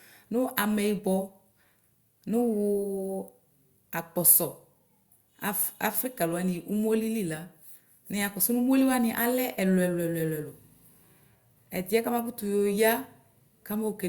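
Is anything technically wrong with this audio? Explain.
No, no technical faults heard.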